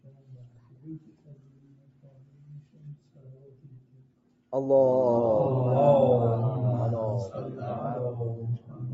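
Right from the top, a noise suppressor built for speech is still switched on for the whole clip, treating steady, sustained sound as noise. Its gain keeps swinging by around 10 dB, so the audio pumps and thins as sustained parts get pulled down while attacks slip through.

From 0.0 to 4.52 s the suppressor clearly takes the sound itself for noise and cuts it, by up to about 8 dB. Held and fading parts sag and their decays get clipped short. The same sound cut by the noise suppressor returns briefly between 8.58 and 8.81 s, again dipping by about 8 dB. Through all of this there's nothing above 8 kHz, as expected from the call path's bandwidth.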